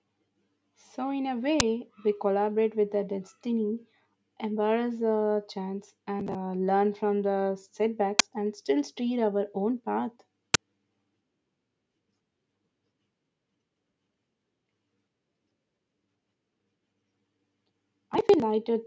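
An uninitialised buffer bursts out at 1.6 s, the first of three, each a single block of about 10 ms. The playback path sent a buffer to the output before any audio had been written into it, so whatever stale values sat in that memory were played as samples. The result is an abrupt, loud crack that vanishes as quickly as it came.

Processor overload crackle follows from 6.20 to 6.35 s. The processor fell behind and missed one audio deadline after another, on the order of fifteen in a row, each missing chunk around 10 ms long and simply skipped rather than filled. Every skip leaves a hard-edged gap in the speech, and packed this closely they merge into a gritty, tearing crackle laid over the voice that clears once the load eases.

Two more uninitialised buffer bursts come at 8.19 s and 10.54 s, the same sharp, loud spurts of leftover-memory noise, each lasting one short block.

Processor overload crackle returns from 18.14 to 18.42 s, longer this time, with around twenty consecutive skipped chunks of roughly 10 ms each. 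The tearing is more sustained here, a rough crackling texture ripping through the speech for almost 0.3 s. Alongside all this, the call microphone processing shapes the sound as intended, with the deepest bass trimmed and nothing above 8 kHz.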